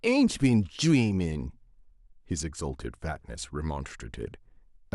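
No technical faults can be heard anywhere in the speech. Nothing in the recording calls for comment from an audio-fault point of view.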